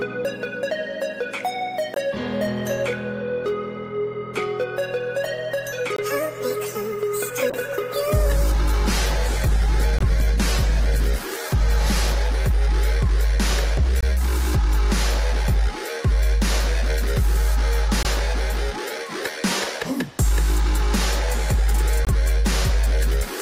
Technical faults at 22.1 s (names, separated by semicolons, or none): gap between chunks